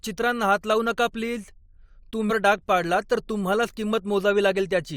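At 2.29 s a brief glitch breaks into the speech, caused by damaged data in the compressed stream that made the decoder misread the frame and lose sync.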